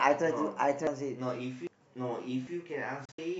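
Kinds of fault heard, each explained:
Audio missing between chunks: the speech skips at 0.87, 1.67 and 2.47 s, each losing roughly a fifth of a second, likely from chunked capture dropping audio at each boundary.
Digital broadcast dropout: between 3.05 and 3.19 s the receiver mutes through several brief holes, fading out within 3 ms, losing about 96 ms in total, the longest gap 64 ms.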